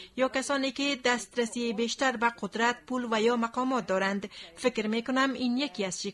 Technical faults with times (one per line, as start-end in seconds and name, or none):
none